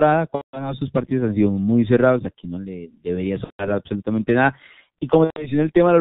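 From the start, the speech carries heavy G.723.1 codec damage. Nothing above 4 kHz survives, so it sounds muffled and hoarse. Consonants blur because the voice model updates slowly over 30 ms frames. The muffled, hoarse quality fits the 6.3 kbit/s mode.

From 0.35 to 0.74 s, VoIP packet loss is concealed by the speech codec. About 180 ms of audio is missing, which fits six lost frames. The decoder repeats its last pitch and filter, so the sound smears into a fading buzzy tone or coloured noise. Similar concealment follows at 3.44 to 3.71 s (about 150 ms) and at 5.24 to 5.50 s (about 120 ms). Each time, the voice stays weak briefly after the gap.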